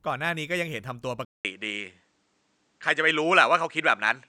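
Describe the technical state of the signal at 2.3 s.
At 2.3 s the recording is in the middle of an input switched to a poorer device, running from 1.25 s to the end. The capture most likely moved to a different, lower-grade microphone path, which cuts everything above 9.3 kHz. After a 200 ms gap at 1.25 s, the speech sounds duller and more boxed-in, with a shift in level of a few decibels and a faint new noise floor sitting well beneath the speech.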